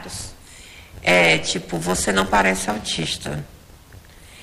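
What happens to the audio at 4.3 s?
At 4.3 s the block size mismatch (padded) is still running, as it does throughout. Each short block is padded with zeros, causing a 91.9 Hz buzz and playback at 0.919 speed, timbre unchanged.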